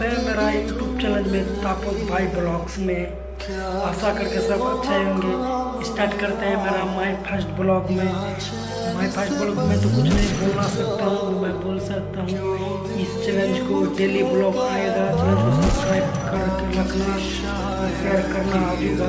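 No faults are audible; the band stops at 8 kHz, which fits a wideband call path such as G.722 at 64 kbps.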